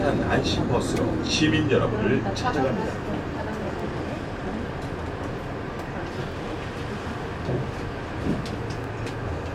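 At 1.27, 3.80, 6.32 and 8.84 s the sound hiccups with overlapping chunks: each new 2.5 s chunk begins before the previous one has finished, so about 23 ms of audio plays twice at every join. It is heard as a brief stutter or click on a steady 2.5 s grid. Unlike a dropout, nothing goes missing or silent. The same fragment repeats, so the sound briefly doubles back rather than gapping.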